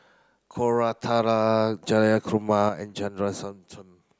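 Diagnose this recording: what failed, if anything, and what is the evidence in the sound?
A sudden gain jump at 2.69 s: the speech and the background both drop about 6 dB instantly and stay down to the end, likely an unramped digital gain change, maybe a one-bit shift.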